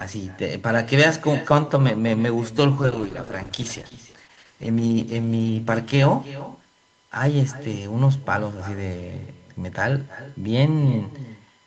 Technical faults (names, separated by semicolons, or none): USB whine; echo with no canceller; call bitrate drop